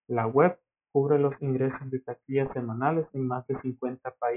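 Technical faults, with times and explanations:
Throughout, aliasing: the speech was taken down to a 6 kHz sample rate without filtering first, so everything above 3 kHz folds back below that point as false, unrelated tones. Sibilants turn gritty and metallic, the folded energy sitting roughly 20 dB under the signal.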